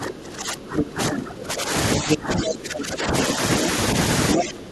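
Right from the start, 0.0 to 1.72 s, the talker's speech keeps ducking, by as much as about 20 dB at the deepest, which sounds like speech suppressed in double talk: the echo canceller likely couldn't tell the two sides apart and pulled everything down. At 1.93 to 2.17 s the other side's voice leaks through at roughly the same level as the talker, probably residual loudspeaker echo. The talker dips again from 1.97 to 3.14 s, by about 15 dB, and once more from 4.34 to 4.71 s, with a short leak of that other voice at about 4.36 s.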